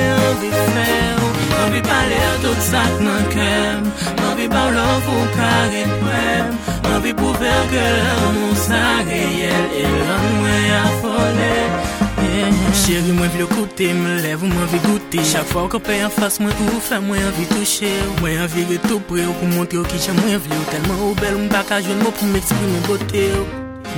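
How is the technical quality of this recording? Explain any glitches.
No glitches turn up anywhere in the recording. There is nothing to explain, as no fault can be heard at any point.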